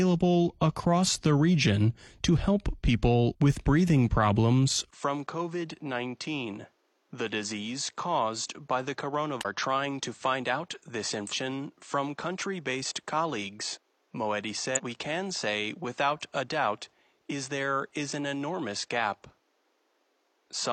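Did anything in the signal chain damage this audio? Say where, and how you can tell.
Yes. From 4.91 s, after a 20 ms gap, the speech turns dull and about 10 dB quieter, with nothing above 8.3 kHz and new background noise roughly 40 dB down. The input was likely switched to a poorer device.

Brief glitches of 50 to 58 ms at 9.41, 11.29 and 14.74 s come from damaged data in a compressed stream, where the decoder misreads corrupted frames and resyncs.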